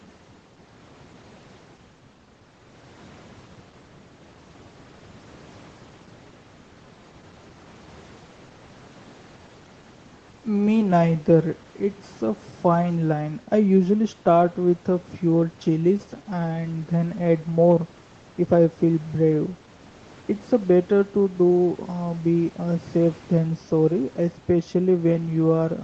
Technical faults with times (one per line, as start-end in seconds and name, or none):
none